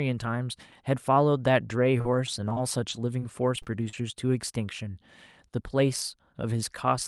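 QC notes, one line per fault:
1.99–3.94 s, repeated packet loss (robotic sound): the speech turns choppy, with ten short dropouts, the longest 34 ms. Each hole is bridged by stretching the preceding sound forward, so around a fifth of a second, a tenth of this stretch, is rebuilt rather than real.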